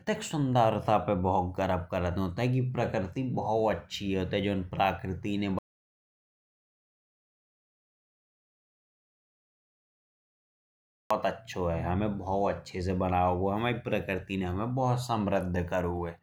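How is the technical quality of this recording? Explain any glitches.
The speech has one glitch. From 5.59 to 11.11 s there is an audio dropout to silence: roughly 5.5 s of silence, likely from a lost input or link. Unlike a natural pause, even room tone vanishes, and the speech stops and resumes abruptly.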